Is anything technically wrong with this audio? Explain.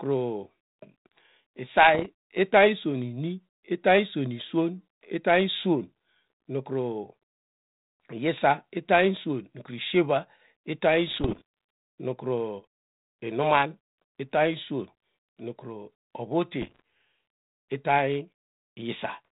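Yes. There are bit errors on an ADPCM link at 1.94–2.07 s, ending just before "itany iswon"; at 11.08–11.42 s, right after "iswon nukru ishier itary"; and at 16.61–16.80 s. Corrupted bits throw the decoder's adaptive step size and predictor off track, so each error keeps ringing for several milliseconds after it occurs. The result is pops and rough, gritty bursts with brief jumps in level. The middle burst is the longest and densest. The underlying narrowband telephone coding, consistent with 32 kbit/s G.726, can be heard as the band-limited carrier for the speech.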